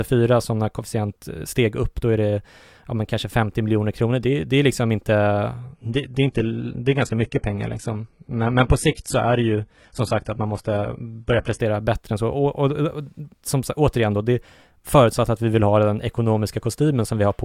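From 5.6 s to 11.6 s the speech switches abruptly, with no gap, to an adaptive stream at a lower bitrate. Nothing survives above 11.8 kHz, the treble drops and artefacts thicken, which fits a drop to 16 kbit/s HE-AAC. Quality returns before "bättre än så".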